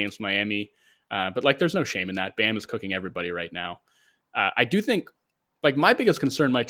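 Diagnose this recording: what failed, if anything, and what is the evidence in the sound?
Nothing in the recording has failed: the speech comes through Opus voice compression in hybrid mode at 24 kbps with fullband bandwidth, and the only trace of that stage is light coding texture, with no dropouts, clipping, distortion or timing breaks anywhere in the signal.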